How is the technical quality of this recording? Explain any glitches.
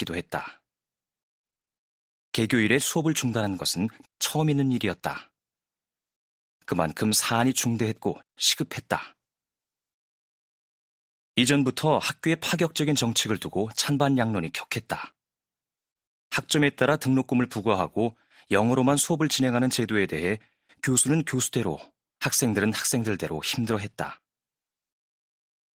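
No glitches turn up anywhere in the recording. The speech carries the light, full-band character of Opus voice compression in its hybrid mode, consistent with a moderate bitrate of around 20 kbps.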